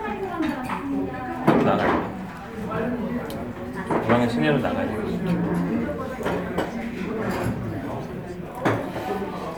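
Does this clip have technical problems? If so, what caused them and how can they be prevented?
No, this recording of sounds has no audible technical faults: the signal holds steady throughout with nothing in its level, continuity or timing to cause a problem or call for prevention.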